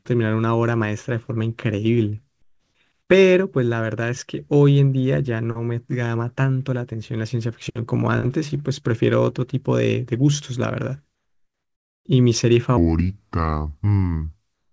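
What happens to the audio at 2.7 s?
Right there, from 2.42 to 2.75 s, the real background gives way to comfort noise: steady, featureless hiss about 2 dB quieter, likely synthesized while transmission paused.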